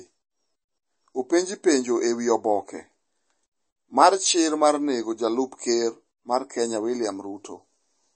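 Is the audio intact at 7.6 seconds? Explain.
No. At 7.6 s the speech carries the same damage heard across the whole clip, likely from MP3 compression at a low bitrate, which fits something around 32 kbps. Short of bits, the encoder cuts everything above 8.4 kHz, leaving a dull top end, and drops weak frequency lines that flicker on and off between frames. The result is a plainly audible watery, swirling texture, with smeared consonant attacks and metallic chirps on s sounds.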